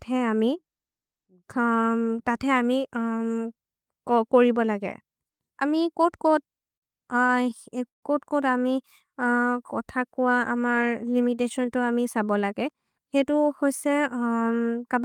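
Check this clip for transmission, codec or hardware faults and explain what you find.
Three packet-timing faults can be heard in the speech, clustered between 6 and 8 seconds, plus one later section that runs fast.

From 6.01 to 6.84 s there are repeated stalls (stutter). Packets arrived late or too slowly, so the jitter buffer emptied four times and the receiver extended the last sound each time: about 89 ms in all, the longest gap 56 ms, with nothing lost. The audio drags in a halting rhythm. The multiple gaps distinguish it from a single stall.

At 7.26 to 7.31 s there is a short stall from a late packet. One packet missed its slot, so the receiver stretched the preceding sound by 24 ms before resuming at the same point. A single briefly held sound with a slight buzz or dip results. It is one event, far shorter than the freeze that follows.

From 7.88 to 8.04 s comes a call audio freeze. 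Sound halts and about 140 ms of near silence is inserted, 141 ms added in total, then the audio continues where it stopped with nothing missing. This was likely packets held up in transit draining the jitter buffer. The silent gap, rather than a held tone, marks it as a freeze.

From 12.20 to 13.33 s there is a jitter buffer speed-up. The buffer held surplus audio, so the receiver repeatedly cut pitch-period-sized slices, around 150 ms overall, playing at 111% speed. The speech sounds hurried at unchanged pitch. That unchanged pitch is what separates it from a simple playback-rate error.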